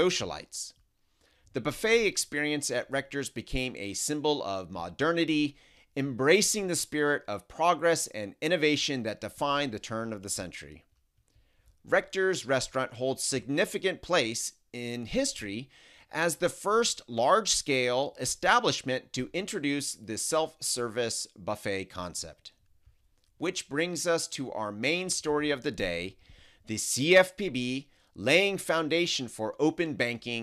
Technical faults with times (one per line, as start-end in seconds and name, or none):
none